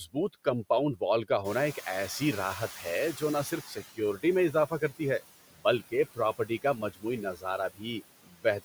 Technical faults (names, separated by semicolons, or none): noise suppressor artifacts; noise suppressor catching up; speech cut by the noise suppressor